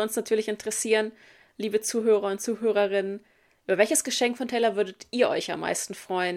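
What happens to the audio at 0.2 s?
Nothing goes wrong at 0.2 s; the speech there comes through intact, with no audible dropout, click, distortion or other fault.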